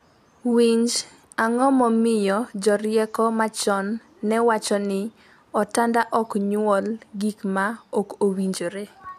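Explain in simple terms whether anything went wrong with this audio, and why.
Nothing stood out as wrong when listening to this speech recording.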